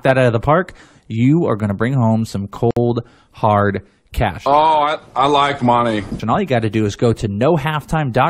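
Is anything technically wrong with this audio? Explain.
Yes. There is a gap at a join of encoded pieces, from 2.71 to 2.77 s, between "to bring home some" and "hard cash". The speech drops into about 58 ms of silence with smeared edges, then resumes where it stopped. The audio was encoded in separate pieces and joined untrimmed, so encoder start delay and final-frame padding remain.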